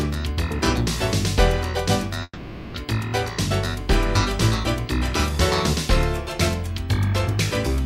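A call audio freeze runs from 2.23 to 2.77 s. The last sound is stretched into a fading buzz for about half a second, with a brief silence before playback resumes. Nothing is lost, but everything after is delayed by 0.51 s. Likely cause: delayed packets draining the jitter buffer.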